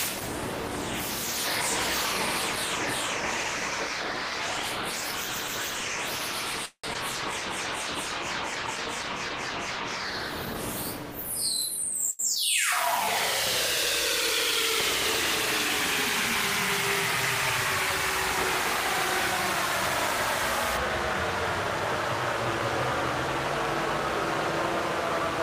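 This recording of everyday sound has five faults. From 6.65 to 6.85 s a call audio freeze occurs, likely from packets held up in transit that starved the jitter buffer: the last sound is stretched for 181 ms, including 60 ms of silence, then resumes with nothing lost. Shortly after, between 6.93 and 6.97 s, a skip ahead drops roughly 70 ms of waiting audio, so playback jumps forward and the two sides are joined almost directly. At 12.11 to 12.21 s a short stall from a late packet empties the buffer, and the receiver holds the previous sound for 84 ms before continuing from the same point. At 12.35 to 12.38 s a short concealed packet loss removes 40 ms before decoding, and the brief synthetic fill leaves an audible smear or wobble. From 20.77 s to the end, de-emphasis applied wrongly tilts the response downward, about 10 dB lower at 10 kHz than at 1 kHz, leaving that stretch dull and muffled.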